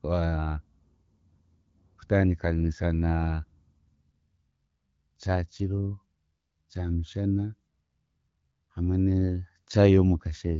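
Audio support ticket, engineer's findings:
No faults found.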